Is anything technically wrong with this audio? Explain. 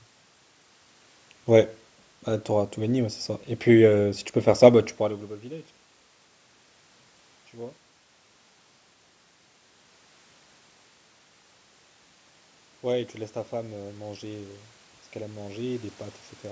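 Yes. From 12.81 to 14.66 s there is automatic gain rising: the gain control judged the input too quiet and lifted its level by about 4 dB over nearly two seconds. Voice and room noise swell together, which separates it from the talker moving near 5 s, where only the voice changed.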